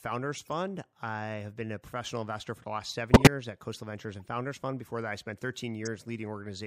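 Corrupt frame decoded at 0.45–0.49 s before "I have been a" (faint), 3.13–3.27 s after "investor for the last" (loud), 4.20–4.28 s (faint), and 5.83–5.87 s after "that I spent": damaged compressed frames were played anyway, spraying misplaced energy as brief chirps, squeaks, blips or bursts of noise.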